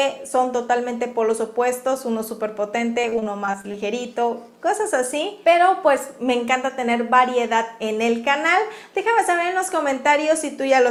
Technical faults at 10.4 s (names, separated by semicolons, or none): none